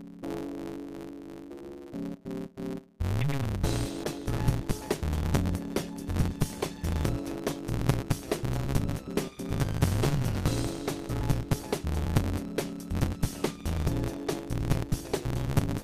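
The audio runs throughout with a block size mismatch (truncated). One stage writes longer blocks than the next reads, consistent with 512-sample writes, so each block's tail is discarded. That produces a 138 Hz buzz and playback 1.6 times too fast, seen as regular vertical seams and fine waveform discontinuities at that rate. From 4.04 s to 7.04 s a call bitrate drop from 64 to 20 kbps makes the encoder code more coarsely. The sound turns rougher, with blurred, patchier spectral detail and thinner upper bands on a spectrogram until the rate recovers.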